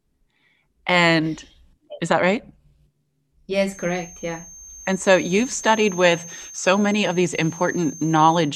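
A loudspeaker-to-microphone loop likely sitting at the edge of feedback leaves a feedback whistle from 3.65 s to the end: a thin 6.3 kHz tone, well below the speech, swelling and fading slowly.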